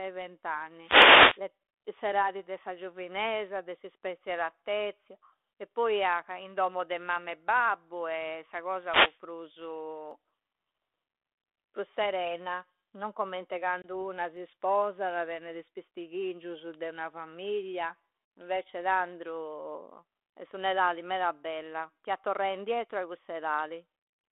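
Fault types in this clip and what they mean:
Wireless microphone noise hit: Short swishes of static rise over the speech from 0.81 to 1.41 s, clearing just before "s'etadi de sa giovinesa", and again from 8.78 to 9.20 s, as the FM radio link faded and receiver noise surged up.
Dropped samples: Single sharp clicks at 10.11 s and at 14.37 s, the second just before "sposada tennede is pistighingiusu", each a thin vertical line in the spectrum. The likely cause is about a tenth of a millisecond missing, so the waveform jumps ahead.
Packet loss on an ADPCM call: At 13.82 s a hard-edged 20 ms hole cuts the speech, which resumes slightly rough before settling. A lost packet was replaced by silence, and the G.726 decoder's predictor and step size drifted from the sender's.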